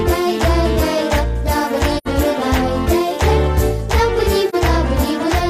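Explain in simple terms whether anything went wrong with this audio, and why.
AAC frame loss with muting at 1.97 to 2.08 s and 4.49 to 4.55 s: the sound softly fades into a short silence and back, then dips briefly. Pieces of the compressed audio went missing and the player filled them with silence. The gaps' lengths suggest about two frames, then one, were lost.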